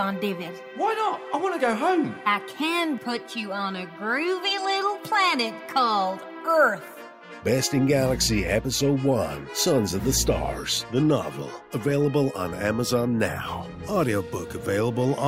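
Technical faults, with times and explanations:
No technical faults found anywhere in the audio.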